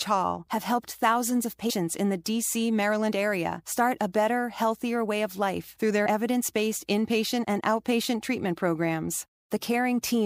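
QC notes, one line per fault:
1.69 s and 6.05 s, compressed frames skipped: the sound jumps ahead by roughly 100 ms, then roughly 50 ms, whole 26.1 ms frames that never decoded. Overlapping neighbours smear each join into a soft blip. On a spectrogram, harmonics shift abruptly at a narrow vertical seam.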